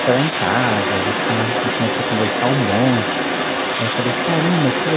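Throughout the clip, a second voice sits only about 5 dB below the main speech, likely the other side's voice leaking through an incompletely cancelled loudspeaker echo.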